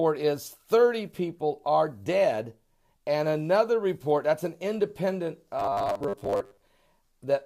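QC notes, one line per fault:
5.59–6.63 s, robotic sound from repeated short buffers: the audio collapses into a rigid, metallic buzz pitched at 100 Hz, likely because fresh audio arrives too slowly and a 10 ms block is replayed to fill the gaps, replacing roughly half the signal.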